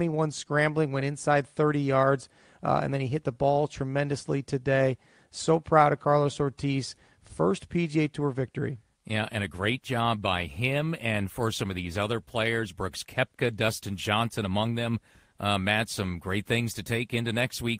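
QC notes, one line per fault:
Nothing stood out on a careful listen to the speech in this recording.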